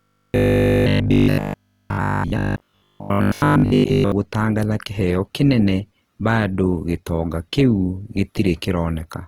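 Right from the start, and for the whole clip, the speech carries Opus compression damage, and it's plainly audible. Nothing much is missing up top, since the band is still fullband, but the encoder is clearly short on bits. The sound fits a low rate around 16 kbps in Opus's music-style CELT mode. That mode keeps each band's energy but patches the detail with folded or noise-like content, so the sound comes out grainy and rough.

Layered on top of that, from 0.02 s to 4.12 s, there's robotic sound from repeated short buffers. New audio seems to be arriving late, so a short slice keeps getting replayed while the real material is skipped, and that happens for most of the stretch. The repeats lock a buzz onto the speech at 50 Hz, which points to 20 ms slices. The result is a stiff metallic drone that still loosely tracks the speech, and the likely cause is an audio buffer being starved.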